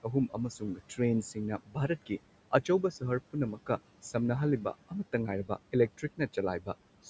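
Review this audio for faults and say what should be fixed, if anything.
Noise suppressor artifacts run throughout the clip. The suppressor pulls the room noise down by about 18 dB, frame by frame, so the background sinks in the pauses and swells back under the speech.

Speech cut by the noise suppressor occurs at 0.03–0.38 s, 0.6–1.0 s, 1.58–1.89 s, 5.98–6.36 s and 6.6–6.75 s. Quiet speech was classed as noise and turned down by about 13 to 19 dB for roughly a tenth of a second or more each time, so sounds come out swallowed or faint.

To prevent both, use gentler, slower-acting suppression with a lower maximum reduction, since the room noise already sits about 17 dB below the speech.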